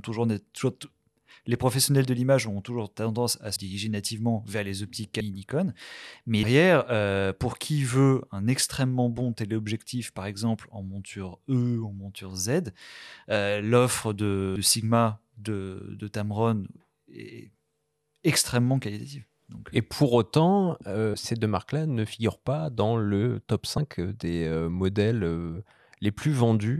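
Compressed frames are skipped at 3.56, 5.20, 6.43, 14.55, 21.14 and 23.77 s. Whole runs of 26.1 ms frames are lost or rejected. The speech jumps ahead by about 70 ms to 0.4 s.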